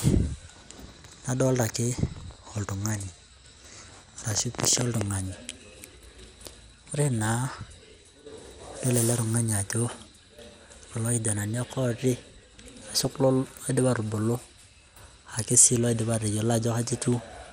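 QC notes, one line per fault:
Throughout: MP2 compression. The speech is dull and carries a gurgling, grainy texture. This is likely Layer II coding at a low rate, which fits something around 80 kbps. At that rate the coder has too few bits for its 32 sub-bands. Upper bands drop out, so the top end is missing and flickers in and out. The bands that remain are quantised coarsely, which adds the granular edge.
7.05–7.28 s and 12.23–13.18 s: DAB burbling. Short bursts of burbling sit over the speech, and the second burst lasts nearly a second. The sound suggests a bit error rate of a few tenths of a percent slipping past error correction into the audio frames. Corrupted samples put short blips of noise into single sub-bands, and corrupted scale factors make sub-bands jump in level for up to a frame. That produces the burbling across 12 frames in the first burst and 42 in the second.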